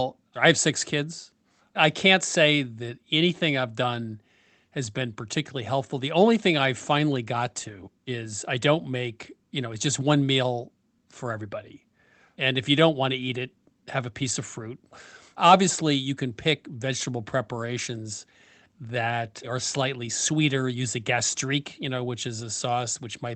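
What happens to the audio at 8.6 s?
Nothing goes wrong at 8.6 s: the speech carries on intact through that moment, with only the usual band-limited character of the call codec path it came through.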